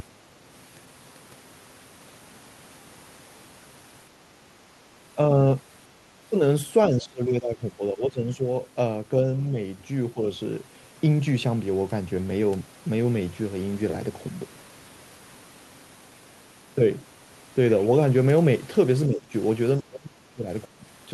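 A DC offset runs through the entire clip: the waveform sits displaced from zero by a constant amount. It cannot be heard as a tone, which separates it from mains hum or rumble. Those have a pitch and pulse, while this appears only as a fixed spectral component at 0 Hz and as a lopsided waveform that eats into headroom on one side and can produce a click at the start or end if the clip is cut without fades.

Across the clip the speech level drops in short pieces: 6.89 to 8.45 s, with the deepest fall about 15 dB; 9.51 to 9.57 s, about 5 dB; 10.14 to 10.19 s, about 10 dB; then a denser stretch at 19.08 to 19.33 s, about 20 dB; 19.81 to 20.49 s, about 25 dB; and 20.70 to 20.85 s, about 20 dB. The likely cause is speech suppressed in double talk, where the echo canceller mistakes the local talker for loudspeaker echo while the far side is also speaking and turns the signal down. Unlike packet loss, these come from the canceller turning the voice down rather than from the warbly, smeared fill of concealment. 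The audio is still carried through the Opus call path, whose band limit near 12 kHz fits a 32 kbps setting.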